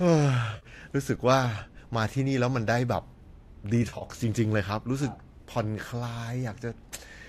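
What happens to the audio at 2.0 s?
Nothing goes wrong at 2.0 s: the speech runs on intact there, with only the light coding texture that is likely from low-delay AAC compression at around 64 kbps.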